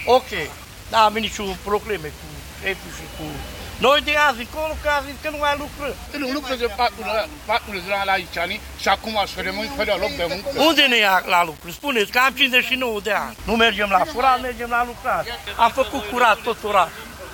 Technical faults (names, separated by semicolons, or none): low bit depth without dither